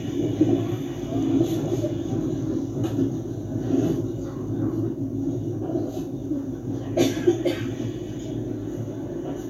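No technical faults can be heard anywhere in this sound.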